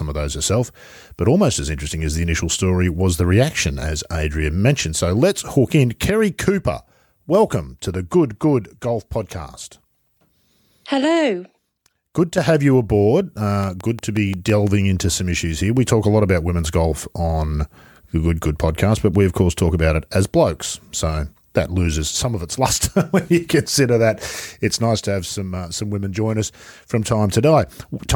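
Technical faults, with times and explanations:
13.64 to 14.68 s, train of clicks: a run of sharp, near-identical ticks cuts across the speech for about a second, coming at a steady 5.8 per second, so you get roughly seven of them, and they sit around 10 dB above the speech, which makes them stick out clearly. Because they're so evenly paced and alike in shape, it's most likely something repeatedly injecting a pulse, like interference from nearby gear or a faulty connection or power supply.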